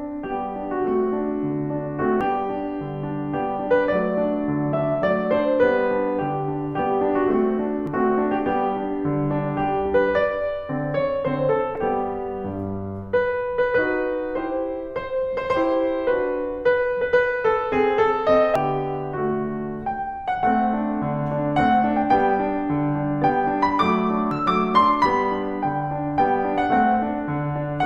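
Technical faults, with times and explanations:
2.21, 7.87, 11.75–11.78, 18.56 and 24.31 s: damaged data in a compressed stream. Corrupted frames briefly throw the decoder out of sync, causing short blips that show as thin broadband vertical streaks.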